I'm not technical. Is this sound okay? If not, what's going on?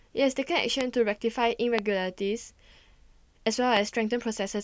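No. The clip has three loud pops, at about 0.81, 1.79 and 3.77 seconds. Each is a single sharp click or thump, much louder than the speech, and the speech carries on underneath it. A pop like this is likely a brief electrical jolt entering the recording chain, such as a loose plug, a switch being flipped, static discharge or a driver glitch. The later two pops are the strongest.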